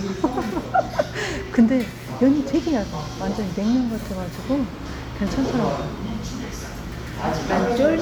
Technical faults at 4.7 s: none

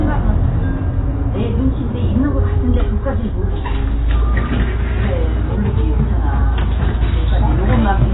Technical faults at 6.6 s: AAC compression

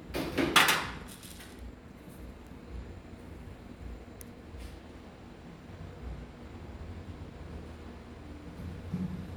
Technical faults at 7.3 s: none

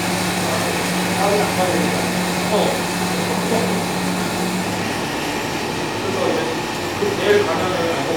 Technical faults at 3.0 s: clock drift buffer slips

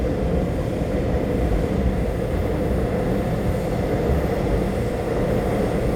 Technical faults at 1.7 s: none

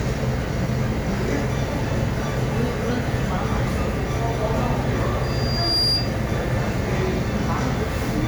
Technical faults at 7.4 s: none

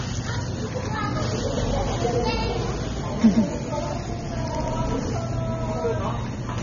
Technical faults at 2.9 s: AAC compression; doubled audio track

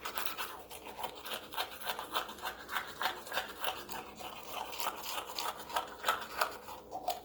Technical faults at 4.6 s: Opus compression

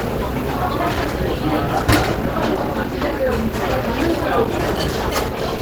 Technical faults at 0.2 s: Opus compression

